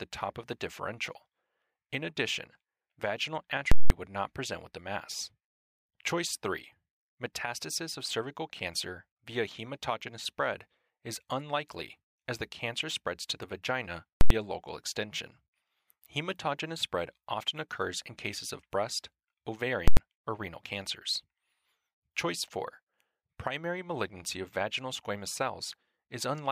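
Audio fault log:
3.72–3.90 s, 14.21–14.30 s, 19.88–19.97 s: invalid numbers at full scale. Bad values pinned the output at maximum for 186, 93 and 93 ms. Each gives loud pops with silence between.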